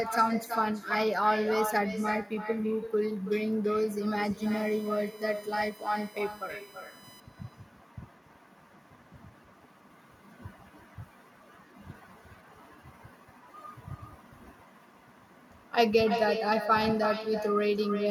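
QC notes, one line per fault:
Throughout, echo with no canceller: every phrase gets a second, quieter copy trailing it by roughly a third of a second, sitting about 8 dB under the direct speech and sounding thinner. That's the far end playing the call on a loudspeaker, its mic picking it back up, and nothing stripping it out, so your own speech returns after the network round trip and smears over whatever comes next.
4.42 to 7.20 s, USB whine: a steady fixed-pitch whine comes in, built on a 1 kHz fundamental, with the strongest component way up at 22 kHz, a high multiple of that rate, and the whole thing sits roughly 25 dB below the signal. That's the USB bus pulling current in 1 ms frames and the ripple leaking in through power or ground, which is why it's locked to 1 kHz and its harmonics.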